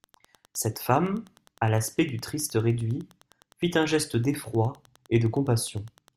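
Wi-Fi interference runs through the whole speech recording: a nearby radio's beacon, sent every 102.4 ms, is rectified by the audio circuit into a steady tick about ten times a second, around 35 dB below the speech. Slow, regular clicks, not mobile-phone buzz at 217 Hz, identify it.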